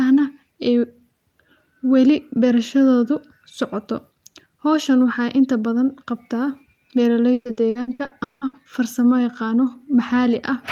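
Speech with repeated packet loss (robotic sound) from 7.33 to 8.56 s: eight gaps, the longest 180 ms, patched by stretching prior sound, so it turns choppy rather than cutting out once.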